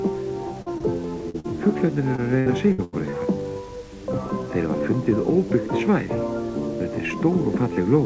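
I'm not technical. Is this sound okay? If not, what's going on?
No. The sound has two kinds of trouble, both from pieces of the call arriving too late.

First, short concealed packet loss at 0.62, 0.78, 1.30 and 1.40 seconds. Each time, a tiny slice of sound, 20 to 40 thousandths of a second, never arrived. The receiver covered the hole by stretching the last bit of sound, so you hear a brief smear or wobble.

Second, repeated packet loss (robotic sound) from 2.16 to 3.14 seconds. Five holes come close together, the longest about 83 thousandths of a second. About a quarter of that stretch is patched-over filler, so the sound turns choppy, with bits missing.

The call line also carries nothing above 8 kHz, so the top end sounds dull.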